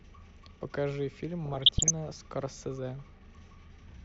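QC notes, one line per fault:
1.45–1.91 s, DAB burbling: bit errors near 0.7 percent escaped error correction, corrupting sub-band levels frame by frame, so short blips of noise and sudden level jumps break into the speech.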